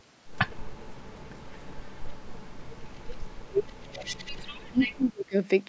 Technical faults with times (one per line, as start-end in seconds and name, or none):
0.55-2.26 speech suppressed in double talk
2.54-5.36 speech suppressed in double talk
3.92-4.32 echo leak